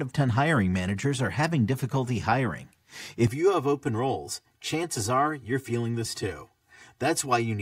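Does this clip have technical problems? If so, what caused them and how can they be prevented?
Yes. Right after "are having difficulty hiring", from about 3.27 s to the end, the speech turns hollow and phasey. That's channel delay (comb filtering): one channel lags by around 3 ms, so the mono sum cancels at evenly spaced notches starting near 200 Hz. To prevent it, check channel alignment and mono compatibility before summing.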